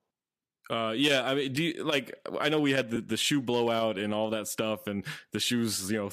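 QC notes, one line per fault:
2.96 s, lost LE Audio frames: between "I know we had" and "the shoe blowout and", about 10 ms of audio is replaced by a noisy smear, which fits one lost 10 ms frame. The decoder filled the gap by repeating the previous spectrum with scrambled signs. This was too brief to fade toward silence. That sets it apart from a hard dropout, which would cut to true silence with clicks at each edge.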